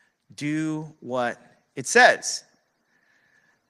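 Between 0.41 and 2.23 s the automatic gain control judged the input too quiet and raised its gain by about 6 dB. This automatic gain rising makes the speech and the background noise swell together, a slow lift in level across nearly two seconds.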